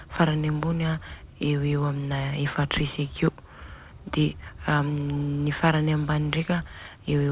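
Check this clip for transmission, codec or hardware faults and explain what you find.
Nothing here points to a transmission, codec or hardware problem; the speech simply carries the narrowband sound of a telephone-style call path, with nothing above 4 kHz, which fits a G.711 A-law codec running at 64 kbps.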